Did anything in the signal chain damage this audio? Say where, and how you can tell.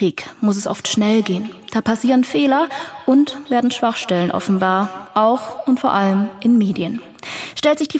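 Yes, there's a feedback echo between two devices, from about 0.5 to 7.38 s. The speech keeps coming back roughly every fifth of a second, peaking about 17 dB below the direct sound. Another device's speaker feeds this microphone, and neither echo canceller catches the other's playback.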